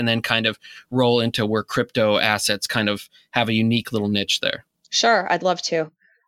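From 2.98 to 3.36 s, just after "where crypto assets kind", the speech drops abruptly by about 6 dB, then recovers before "a unique little niche". This is likely one channel dropping out before the mono sum. The waveform shows a sudden step down and back up, and the spectrogram band dims evenly.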